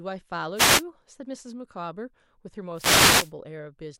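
A short swish of static cuts across the speech from 0.55 to 0.84 s, and a longer burst returns from 2.74 to 3.32 s. Both are wireless microphone noise hits. The FM radio link between the transmitter and receiver momentarily faded as reflected signal paths cancelled each other. As the carrier weakened, the receiver's own hiss rose for roughly 0.3 s and then 0.6 s.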